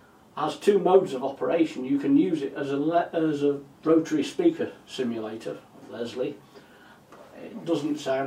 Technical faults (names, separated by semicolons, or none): none